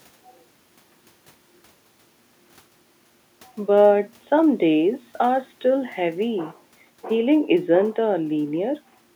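No technical faults can be heard anywhere in this recording.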